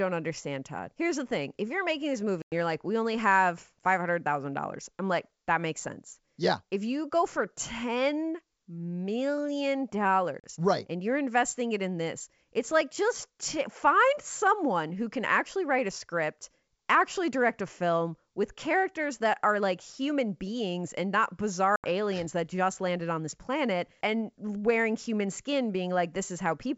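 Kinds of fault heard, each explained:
Packet loss on an ADPCM call: three abrupt silent gaps of roughly 100, 40 and 80 ms. Afterwards the speech returns briefly with slight distortion.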